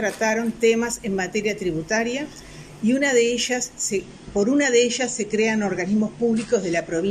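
An adaptive stream at a lower bitrate takes over at 4.03 s and continues to the end at 7.10 s. The player has switched to a leaner encoding of the same stream, most likely because the connection slowed. The change is abrupt but seamless, with no gap. From that point nothing survives above 9.6 kHz, so the top end sounds dulled, and the coarser coding leaves more smeared, swirly artefacts, consistent with a drop from around 96 to around 32 kbit/s AAC.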